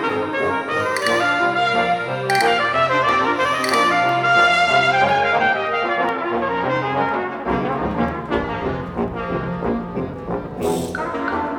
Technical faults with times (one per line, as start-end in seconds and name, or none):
0.10-11.07 periodic USB or driver dropouts